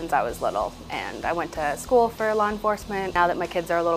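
Nothing goes wrong anywhere in this audio, so there aren't any technical faults to point out.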